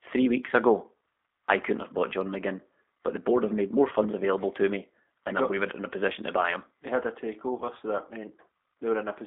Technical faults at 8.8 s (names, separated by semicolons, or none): G.729 codec